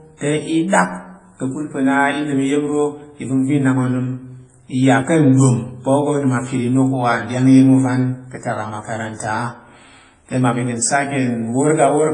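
Heavy WMA compression damage runs throughout this speech clip, likely from a low-bitrate transform encode around 24 kbps. Nothing survives above 10.5 kHz, and long coding blocks smear quantisation noise over tens of milliseconds, leaving ringing, washy detail and hiss that breathes with the signal.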